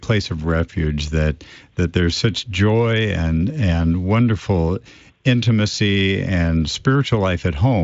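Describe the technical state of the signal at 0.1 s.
At 0.1 s the signal is intact, with no fault present; the Speex coding carries the speech there with at most faint damage.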